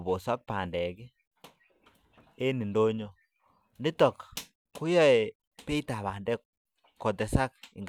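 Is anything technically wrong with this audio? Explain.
No, nothing technically wrong can be heard in this speech recording. There is no fault to explain.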